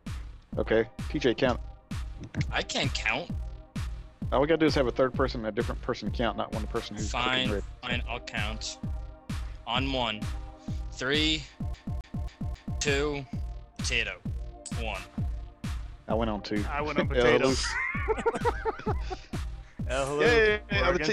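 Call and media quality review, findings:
Fast, even stutter, 11.74 to 12.81 s: the same 0.27 s slice repeats four times, with a brief mute at each jump. CD stuck on one turn. Scratch on the disc throws the laser back one track per rotation, replaying that segment.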